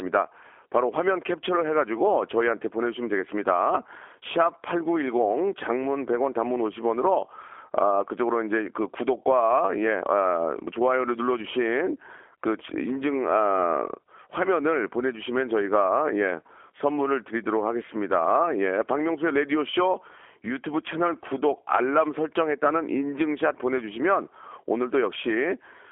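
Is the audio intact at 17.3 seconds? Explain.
No. At 17.3 s the speech carries G.729 codec damage, present throughout the clip. Each short frame is rebuilt from a vocal tract filter, a pitch predictor and a few pulses, which fits an 8 kbit/s codec. Nothing passes above 3.5 kHz, so the voice sounds narrow, rough and synthetic.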